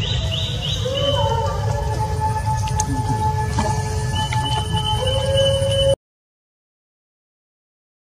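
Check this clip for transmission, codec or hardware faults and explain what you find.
One fault appears: an audio dropout to silence beginning at 5.94 s and running to the end of the clip, about 2.2 s of silence. The input was likely lost, through a disconnection, link failure or mute, while recording continued. Unlike a fade or noise gate, the sound stops abruptly mid-flow and no room tone remains.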